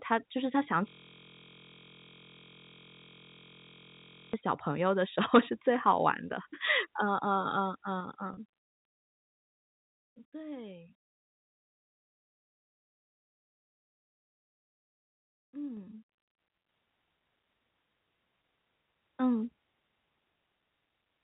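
From 0.88 s to 4.34 s the speech freezes into a steady, coarse buzz at about 43.1 Hz. This is a system hang loop: the same 23.22 ms slice of audio repeats back to back, which fits a 1024-sample ring buffer being replayed after the system stalled.

Between 7.85 s and 9.13 s, a dry ticking rides on the speech as its level drops by roughly 10 dB. This zipper noise comes from the gain moving in unsmoothed 3 dB steps, about three times a second, with each jump leaving a small click.

Inside that stretch, at 8.34 s, the sound briefly holds on a slightly buzzy, sustained tone for about 30 ms. This is packet loss with pitch repetition: a few packets went missing, and the receiver filled the gap by repeating the last pitch period.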